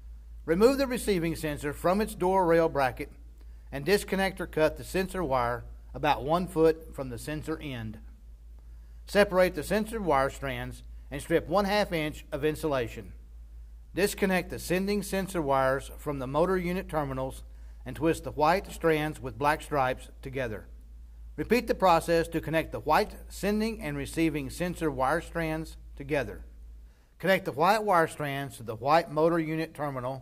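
No technical faults can be heard anywhere in the recording.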